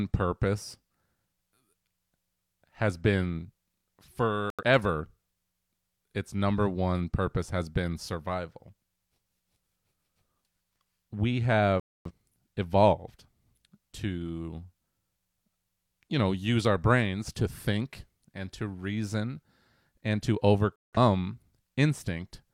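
The speech mutes three times, a digital broadcast dropout each time. Silence falls at 4.50 to 4.63 s, at 11.80 to 12.11 s, and after "and to" at 20.76 to 20.98 s. The receiver lost whole frames, so that audio is gone.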